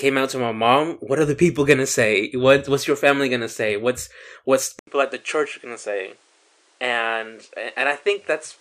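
From 4.79 s, after an 80 ms gap, speech turns dull and quieter, topping out at 10.9 kHz: likely the input switched to a poorer device.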